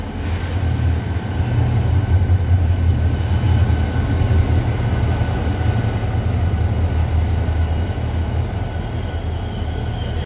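No technical faults are audible.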